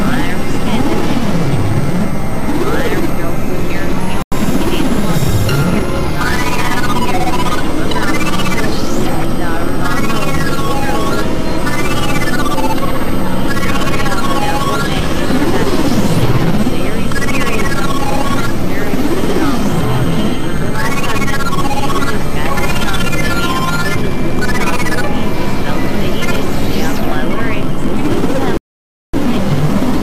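A Bluetooth stall at 4.22 s cuts the sound to silence for 95 ms until 4.32 s, and a longer one at 28.57 s leaves a gap of 563 ms before audio returns at 29.14 s. Both are likely caused by radio interference delaying packets, so the headphones' buffer emptied and playback halted until retransmitted data arrived. Each gap is a clean dropout to silence, with the sound picking up again afterwards.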